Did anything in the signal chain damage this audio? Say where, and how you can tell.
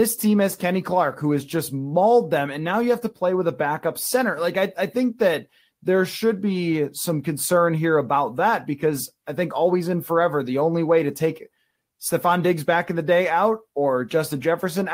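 No, nothing in this speech recording points to damage from any stage of the signal chain, so there's nothing here to trace back to a cause.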